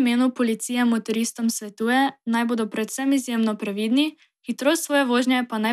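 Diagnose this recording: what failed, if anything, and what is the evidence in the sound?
Nothing failed: no stage in this recording shows a fault, and nothing in the sound points to one.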